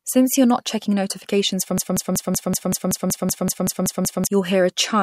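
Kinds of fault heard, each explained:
Broken-record loop: a 0.19 s slice repeats identically 13 times, likely a stalled stream resending the last fragment; unlike echo, nothing fades and skipped speech is lost.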